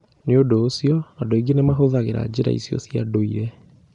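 Throughout the speech there is a rough, hissy halo and a smeared, underwater tone. This is likely Nellymoser compression filling starved bands with noise. On a spectrogram, the energy ends sharply at 10.7 kHz.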